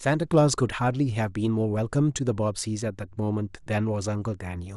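The speech sounds dull and gurgling from start to finish. Upper frequencies drop in and out, and what remains has a grainy, coarse edge. This is plainly audible MP2 compression, likely from a low bitrate near 80 kbps. Too few bits shut off whole upper sub-bands.

From 0.34 to 0.41 s, DAB burbling breaks in briefly. A small share of bit errors got past error correction for a few frames. Corrupted samples put short blips of noise into single sub-bands.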